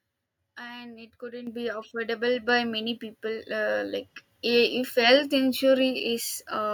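At 1.47 s the microphone volume steps up by about 9 dB, then again at 2.49 s by about 4 dB. The input level was raised in sudden jumps rather than ramped, so speech and background get louder together at each point.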